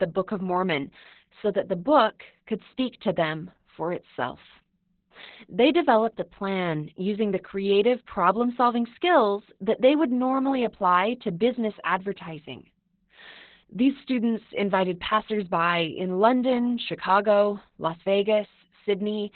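Opus voice compression throughout: heavy, coarse SILK-style coding leaves nothing above 4.3 kHz, so speech sounds muffled and hoarse, consistent with roughly 8 kbps narrowband.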